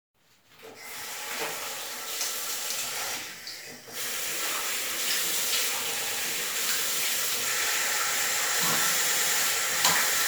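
An everyday sound recording with repeated frames. Near 6.00 s a 104.5 ms block plays twice more, then at 9.03 s three more times, adding 209 ms and 313.5 ms.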